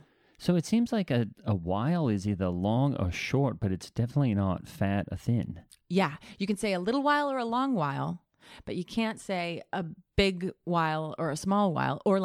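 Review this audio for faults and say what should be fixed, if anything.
Nothing stood out on listening, so there is nothing here that needs fixing.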